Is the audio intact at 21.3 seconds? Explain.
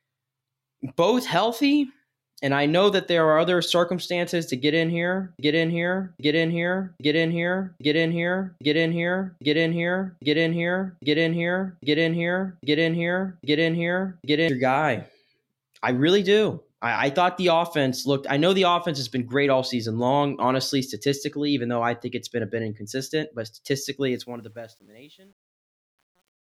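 Yes, the speech is intact at 21.3 seconds, with no fault at that moment.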